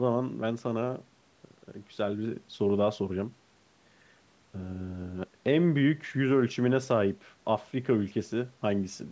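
Speech clip, no technical faults.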